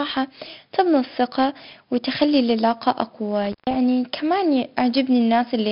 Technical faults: 4-bit ADPCM compression; intermittent contact

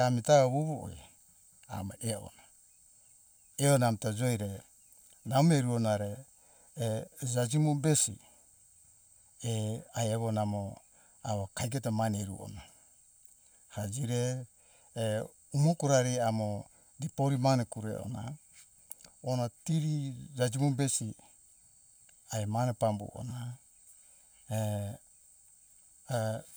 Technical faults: channel delay (comb filtering)

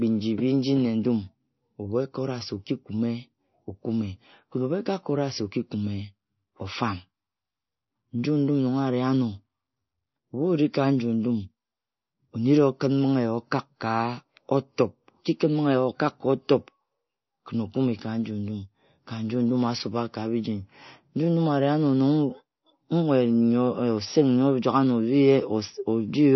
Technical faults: MP3 compression

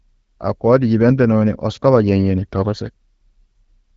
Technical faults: none

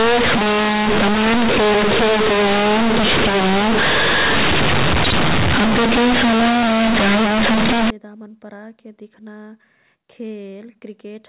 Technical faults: companded audio read as linear

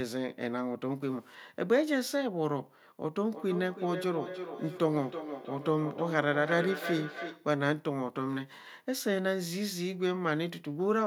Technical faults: feedback echo between two devices

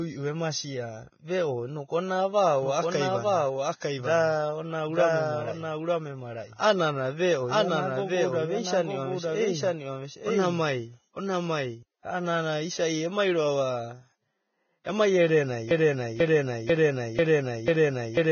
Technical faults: Vorbis compression; doubled audio track; broken-record loop

